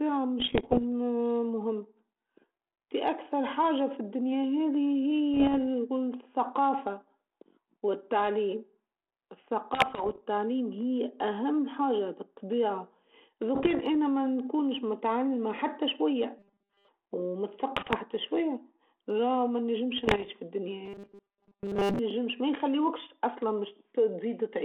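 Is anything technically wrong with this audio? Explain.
Yes. The speech, carried over a 32 kbit/s G.726 ADPCM link limited to about 300 Hz to 3.4 kHz, has two kinds of fault.

Bit errors on an ADPCM link: at 0.40–0.83 s, 5.34–5.59 s, 9.74–10.19 s, 13.55–13.81 s, 17.76–17.96 s and 19.98–20.28 s there are pops and rough, gritty bursts with brief jumps in level. Roughly 0.7 to 2 percent of the bits arrive flipped. Each wrong code also knocks the decoder's step size and prediction off course, so the damage rings on for several milliseconds before it settles.

Robotic sound from repeated short buffers: at 16.39–16.89 s and 20.86–21.99 s the speech turns into a rigid, metallic buzz near 200 Hz that still loosely follows the speech. The likely cause is audio arriving too slowly, so the playback loops the last few milliseconds for most of each stretch. A 200 Hz buzz fits a repeat of about 5 ms, and the real audio in between is lost.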